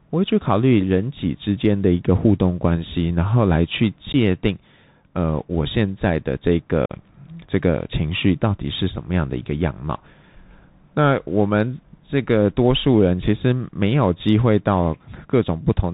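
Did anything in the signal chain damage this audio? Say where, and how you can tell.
Yes. At the codec stage, the whole clip carries Bluetooth CVSD headset codec damage. Nothing passes above 4 kHz, s sounds are scratchy, and a granular hiss sits under the speech. That hiss and the distortion on loud high sounds set it apart from a plain band-limit, because the one-bit, 64 kbps delta coder's adaptive step can't keep up.

On the wireless link between headset and phone, there is unconcealed Bluetooth headset packet loss at 4.13–4.15 s and at 6.86–6.92 s, the second gap about 41 ms long. These are short holes with abrupt edges, and the speech comes back briefly quieter. That rules out concealed loss, which would bridge the gaps smoothly.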